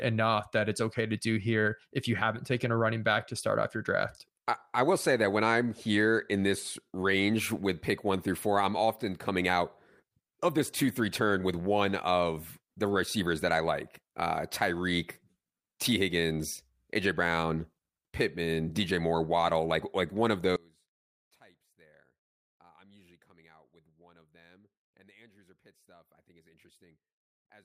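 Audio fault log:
20.56–27.65 s: one channel inverted. Summed to mono, the speech drops by about 31 dB, leaving a faint trace. One channel's reversed polarity likely cancels the shared centre.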